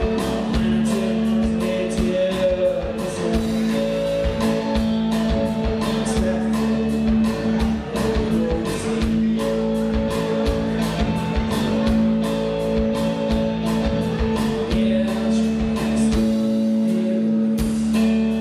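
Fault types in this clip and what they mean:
No technical faults can be heard anywhere in this audio; the signal stays continuous and intact throughout.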